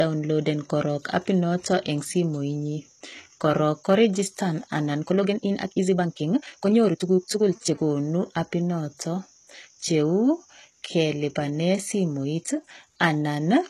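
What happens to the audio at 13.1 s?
At 13.1 s, as through the whole clip, the speech carries plainly audible damage of the kind HE-AAC compression likely produces. The treble is rebuilt by copying lower bands upward under a coarse envelope, so s sounds come out gritty, lispy and metallic. That points to a very low bitrate, around 16 kbps. Unlike a simple low-pass filter, which leaves the top dull, the treble here stays bright.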